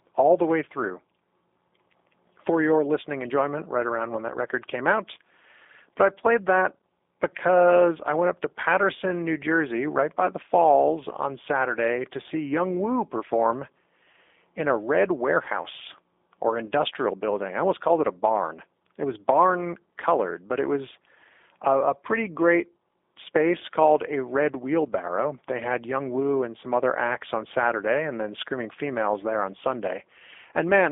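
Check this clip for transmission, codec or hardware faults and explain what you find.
One fault, present throughout: a G.729 codec. The speech is rebuilt from a vocal-tract filter and sparse pulses, which fits 8 kbit/s. It sounds plainly rough and synthetic, with nothing above 3.7 kHz.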